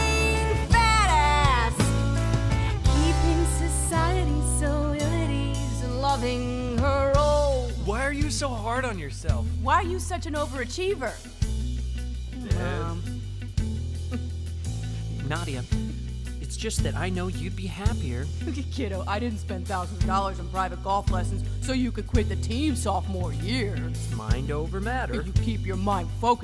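No technical faults can be heard anywhere in the recording. There are no dropouts, glitches or distortions at any point.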